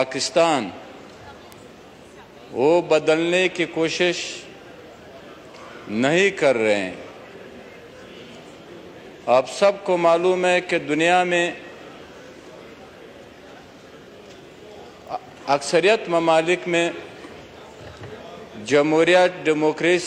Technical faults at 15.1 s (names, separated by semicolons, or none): bit error spike